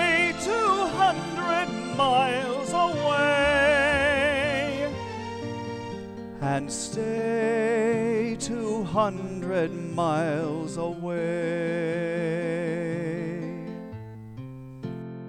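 Nothing stood out as a technical problem on listening to the audio.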